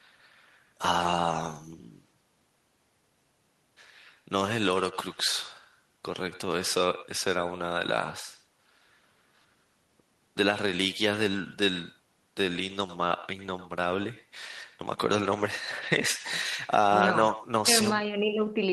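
Throughout, every phrase is trailed about a tenth of a second later by a thinner copy at about 16 dB down: echo with no canceller, the far loudspeaker leaking back.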